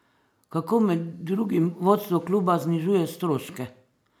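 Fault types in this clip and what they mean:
Nothing stood out on listening to the speech here.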